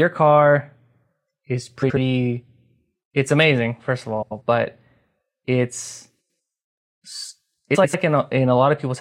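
Speech, with four brief stretches of frames out of order. They fall at 1.82 to 1.97 s, 4.22 to 4.42 s just after "amazing first of", 6.20 to 6.38 s, and 7.75 to 7.95 s. In each, two adjacent blocks of audio play in swapped order. Each block is about 70 ms in the first and about 93 ms in the rest, which fits runs of three or four codec frames. The result is a garbled flutter. The timing stays intact.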